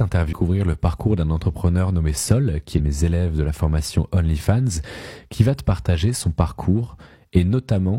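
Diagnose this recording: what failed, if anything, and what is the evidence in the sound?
Damaged data in a compressed stream, at the codec stage: there's a brief glitch from 0.28 to 0.33 s, right before "le parcours d'un entrepreneur", and another from 2.74 to 2.80 s before "mes élèves de la". Corrupted frames threw the decoder out of sync until it caught the next header.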